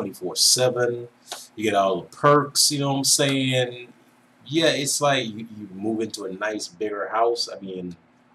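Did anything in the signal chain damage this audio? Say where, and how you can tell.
Yes. From 6.52 s to the end at 8.35 s, de-emphasis is applied wrongly at the playback stage: a treble-cut filter meant to reverse pre-emphasis acts on audio that doesn't need it. The top end falls away smoothly, about 14 dB down at 10 kHz relative to 1 kHz, so the sound turns dull and muffled. On a spectrogram, the upper bands dim abruptly at 6.52 s; the waveform looks rounder, its sharp transients softened.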